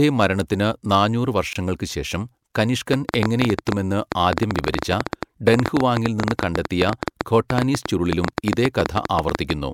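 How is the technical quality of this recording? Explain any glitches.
Two faults affect the technical quality of this speech recording: a brief dropout near the start and a sustained run of clicks through most of the remainder.

From 1.53 to 1.56 s there is a gap at a join of encoded pieces. The segments were encoded separately and joined untrimmed, so the encoder's start-up silence and end padding remain. The result is a roughly 24 ms hole in the speech with softened edges, after which the speech resumes where it stopped.

From 2.94 to 9.51 s a train of clicks runs over the speech and its pauses, at about 10.7 per second with irregular spacing, roughly seventy in all. The clicks are similar in shape and peak around 20 dB above the speech, giving a distinct popping tick. The likely cause is interference from nearby equipment or a faulty connection or power supply injecting pulses.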